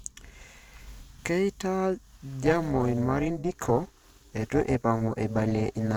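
From 2.43 s to the end, the speech takes on a metallic buzz near 300 Hz, about 11 dB deep. This is overlap-add ripple: frame windows overlapping without constant gain.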